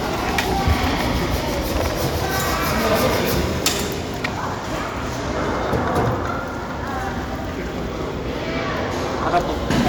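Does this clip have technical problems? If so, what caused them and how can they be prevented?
Yes. Hard clipping occurs from 0.38 to 1.35 s, 1.76 to 3.70 s, and 9.27 s to the end. The signal overran a stage by about 9, 15 and 8 dB, so its peaks were cut flat, adding harmonics far up the spectrum. To prevent this, reduce gain before that stage.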